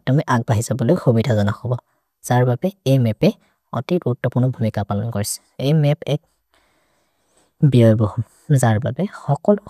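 No technical faults can be heard anywhere in the recording; the signal stays steady and intact throughout.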